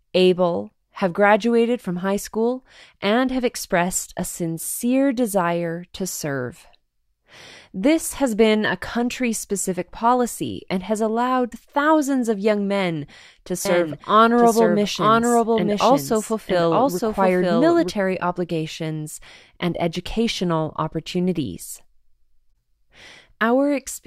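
From 13.65 to 17.91 s, right after "of young men to" and ending before "obligations and educational opportunities", a doubled audio track appears, likely from the speech being captured a second time through a slower path. A second full-band copy runs roughly one second behind the first at about the same loudness, with no decay or room colouring. The overlapping speech collides with itself, and the copy starts and stops abruptly at both edges.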